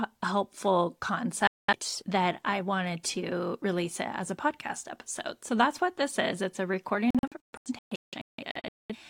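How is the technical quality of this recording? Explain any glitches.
Digital broadcast dropouts at 1.47–1.73 s and 7.10–8.95 s: the receiver muted on lost or corrupted frames, leaving a 213 ms hole, then scattered gaps totalling 1.1 s.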